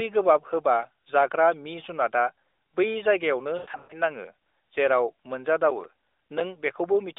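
It's a speech clip carried over an AMR narrowband mobile path, so it sits in roughly a 300 Hz to 3.7 kHz band with light codec colouring at what sounds like 12.2 kbps. Right after "मि जुनातआ बै जायगायावनो", from 3.58 to 4.00 s, you get lost AMR speech frames. About 220 ms of audio drops out, spread across roughly 320 ms. The decoder keeps repeating its last good frame at falling level, so the voice warbles and stretches, and it sags toward silence in the longest 120 ms run. Then from 5.71 to 6.41 s there's processor overload crackle. Something like fifteen tiny silent gaps, each around 5 ms, land as missed buffer deadlines, and their hard edges give a gritty tearing over the speech.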